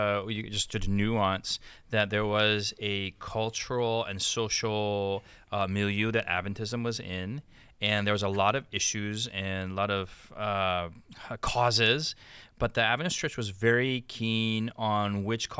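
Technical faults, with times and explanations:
No technical faults can be heard anywhere in this speech recording. There is nothing to place on a timeline.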